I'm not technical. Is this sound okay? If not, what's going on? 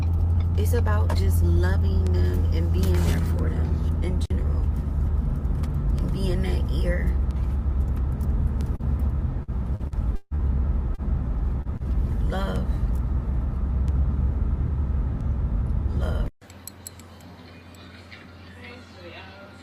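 No. Between about 8.75 and 11.8 seconds the audio briefly breaks up.

At 8.75, 10.94, 11.62 and 11.77 seconds there are quick smears or wobbles where the sound seems to skip. This is short concealed packet loss. Each time, about 40 milliseconds of audio got lost on its way through the connection. The receiving end covered each hole by stretching out the sound just before it, then blended back into the real audio.

From 9.43 to 10.41 seconds the sound turns choppy and mechanical. This is repeated packet loss, which gives a robotic sound. Five separate chunks went missing in quick succession, the longest about 0.16 seconds. About a third of that stretch is patched-in filler rather than real sound, so the gaps come too close together for the covering-up to stay hidden.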